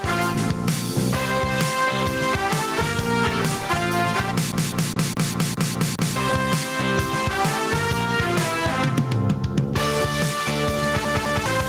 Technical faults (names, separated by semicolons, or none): gain pumping; CD stuck on one turn